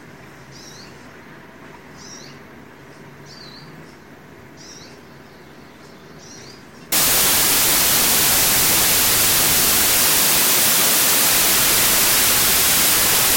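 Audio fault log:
6.92–13.37 s, samples built from the wrong bytes: from 6.92 s to the end, the audio gives way to loud, harsh broadband noise because each sample is being assembled from mismatched bytes, shifted or swapped, so the rapidly changing low-order bits land in the most significant position. The waveform turns dense and erratic, and the spectrogram fills with broadband energy across all frequencies.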